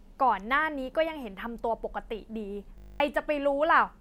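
At 2.78 s the speech stops and a system hang loop takes over until 3.0 s. The system froze while the sound hardware kept replaying its ring buffer. One 20 ms slice repeats exactly, about eleven times. Because the slice is so short, it fuses into a steady buzz at 50 Hz rather than a stutter. When the audio resumes, roughly a fifth of a second of speech has gone missing.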